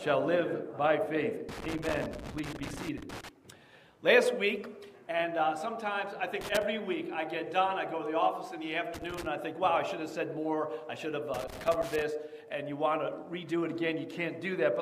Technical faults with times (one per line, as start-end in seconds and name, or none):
1.49-3.29 loose connector crackle
6.41-6.63 loose connector crackle
8.94-9.26 loose connector crackle
11.34-12.02 loose connector crackle